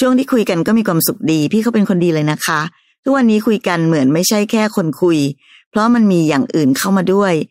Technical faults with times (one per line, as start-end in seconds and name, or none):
none